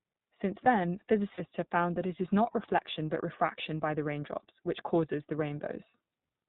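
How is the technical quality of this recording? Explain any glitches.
The recording is narrowband speech with plainly audible codec damage throughout and one short dropout.

From start to finish the audio carries iLBC codec coloration. Nothing above 4 kHz survives, so the speech sounds muffled, and each 20 ms frame's excitation is coded on its own, leaving a slightly rough, synthetic grain. The degree of roughness fits the 15.2 kbps mode. Unlike plain band-limiting, which only dulls the sound, this adds a buzzy, artificial texture to the speech itself.

Between 1.34 and 1.41 s, just before "have found that it", there are lost iLBC frames. About 40 ms of audio is missing, which fits two dropped 20 ms frames. The decoder filled the gap by repeating the last pitch cycle blended with noise, so it sounds like a briefly held, faintly buzzy vowel rather than silence or a click. Because iLBC frames don't depend on earlier ones, the speech comes back clean immediately, with no smeared recovery afterward.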